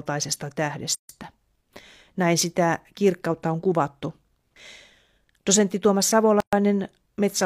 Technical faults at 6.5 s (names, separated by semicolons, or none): gap at a join of encoded pieces